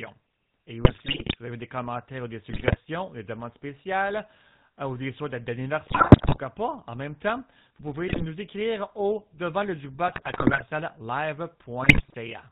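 A buzzy, gravelly roughness runs through the whole speech clip, with nothing above 4 kHz. That is the GSM full-rate codec, which fits a 13 kbps stream: it rebuilds the vocal tract from a filter driven by sparse, regularly spaced pulses, so fine detail turns to buzz.

Squawks, pops and gargling break in at 0.82–1.36 s, just before "vous avez des commentaires", then at 2.50–2.77 s, 5.86–6.38 s, 8.08–8.24 s between "en même temps vous" and "écrire au devant le", 10.08–10.63 s just after "écrire au devant le", and 11.82–12.14 s. These are GSM bit errors, at roughly 3 to 6 percent. Corrupted filter, pitch and gain values warp the spectrum or spike the level frame by frame.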